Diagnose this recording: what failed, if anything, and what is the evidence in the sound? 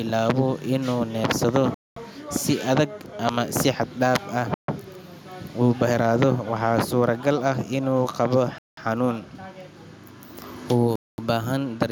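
The speech cuts to clean silence four times, at 1.74–1.97, 4.54–4.68, 8.58–8.77 and 10.96–11.18 s, for 140 to 225 ms each, then resumes. That points to a likely Bluetooth stall on the wireless link: the headphone buffer emptied while packets were resent. A packet-loss dropout would instead lose audio or fill the gap.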